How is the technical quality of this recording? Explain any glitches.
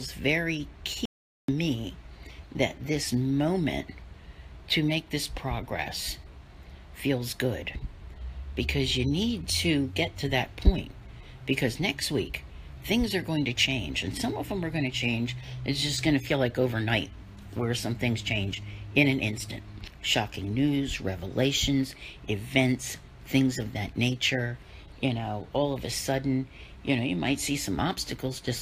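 There is one glitch, an audio dropout to silence. It runs from 1.05 s to 1.48 s, about 430 ms. The sound stops abruptly and then returns mid-flow. The gap is silent, with no background hiss or room tone at all. That points to lost input rather than a quiet passage. The likely cause is a brief break in the signal path, such as a loose connection or momentary mute, while recording continued. Whatever sounded during that gap is lost.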